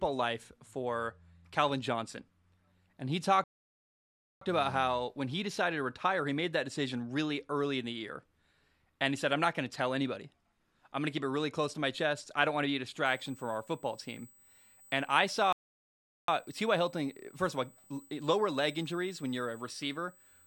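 A speech recording in which the sound twice cuts out mid-flow and later picks up a thin, high whine. The first dropout comes right after "and he", from 3.44 to 4.41 s, a silence of about 0.98 s. The second runs from 15.53 to 16.28 s, roughly 0.76 s. Each time the speech resumes after the gap. These are playback stalls, likely caused by the player's output running dry or its audio thread being held up so that nothing reached the output until it caught up. From 13.06 s, just after "want to be a", a steady, fixed-pitch tone sits under the speech to the end of the clip. It is about 30 dB below the speech and is built on 8 kHz, with its strongest component at 16 kHz. That is USB whine: the bus's 125-microsecond microframe activity leaking into the audio path through shared power or ground, so its harmonics land at multiples of 8 kHz.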